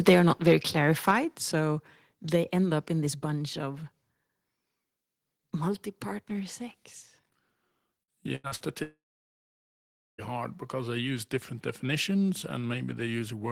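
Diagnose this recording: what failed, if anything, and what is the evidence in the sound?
Between 1.07 and 1.11 s the loudest peaks have a harsh, crackling edge. This is microphone overload at the converter. The input level pushes the waveform about 2 dB past full scale, and a few percent of the samples in that stretch are flattened at the ceiling, likely because the input gain was set too high. The distortion sits only on the peaks and the level stays steady. That separates it from a codec artefact or a gain change, which would smear or shift the whole signal.

Right after that peak, at 1.11 s, the sound and its background drop together by about 6 dB in a single step and stay lower. This is a microphone volume stepped down in call processing, likely the software's automatic gain control reacting to the clipping just before it. A performer backing away from the microphone would fade gradually and leave the room noise where it was. 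A device gain change lowers everything at once.

From 8.03 to 8.70 s there is repeated packet loss with a robotic sound. Short holes keep appearing, each patched by stretching the previous sound, so the audio turns choppy. The longest hole is 82 ms, and about a third of the span is concealed. This is a network fault. The gaps are brief and recur, and normal audio returns between them, which sets it apart from a single sustained outage.

At 8.83 s the sound trails off into a fading buzz or hiss and then goes silent for about 1.2 s. The audio resumes at 10.21 s without the missing 1.4 s or so. This is a long network dropout, likely a complete stall in packet delivery. The concealment gives up after a few tenths of a second instead of refilling short holes over and over. That, together with the unbroken silence, distinguishes it from the choppy loss just before.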